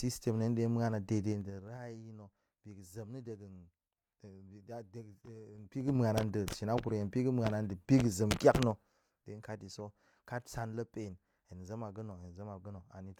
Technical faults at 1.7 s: zipper noise

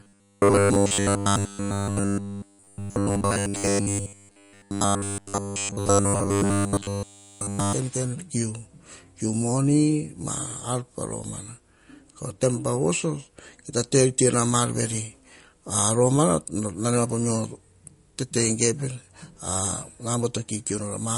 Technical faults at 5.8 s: MP3 compression; robotic sound from repeated short buffers

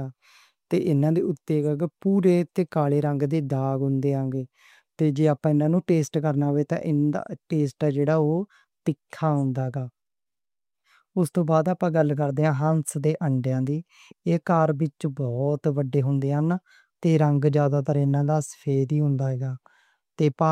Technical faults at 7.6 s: none

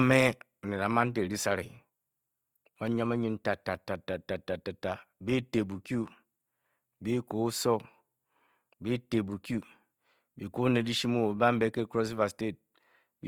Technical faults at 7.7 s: Opus compression

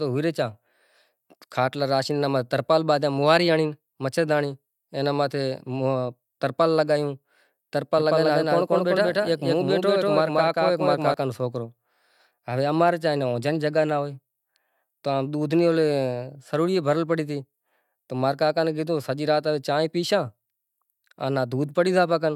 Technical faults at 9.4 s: doubled audio track

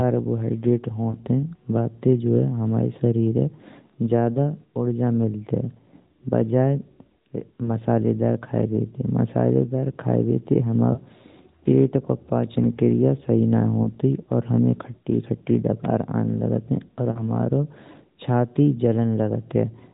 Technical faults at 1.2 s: lost AMR speech frames

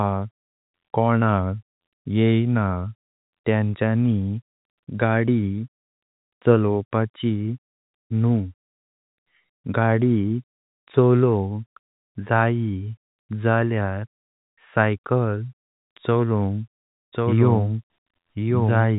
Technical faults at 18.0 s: doubled audio track

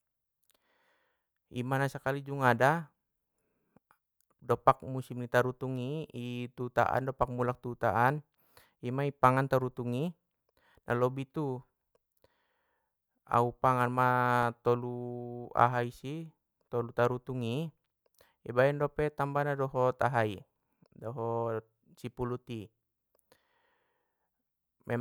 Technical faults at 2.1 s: none

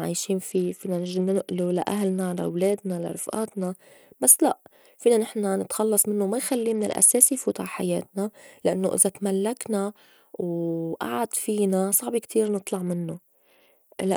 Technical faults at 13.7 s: Bluetooth SBC bit pool drop

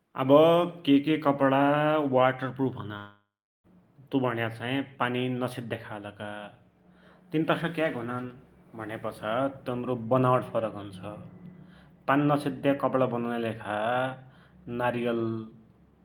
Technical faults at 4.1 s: jitter buffer speed-up

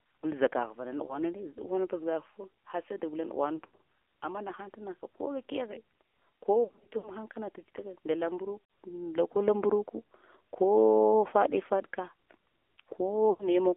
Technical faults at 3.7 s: AMR narrowband mobile codec; lost AMR speech frames

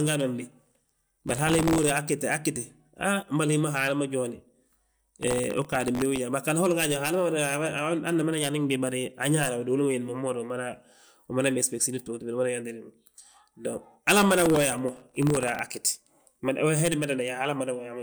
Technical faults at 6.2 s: processor overload crackle

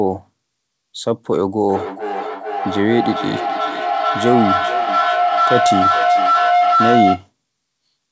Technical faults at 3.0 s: feedback howl

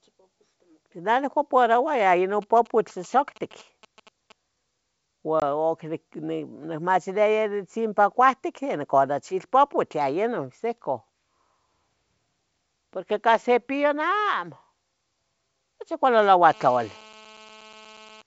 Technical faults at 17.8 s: GSM phone buzz

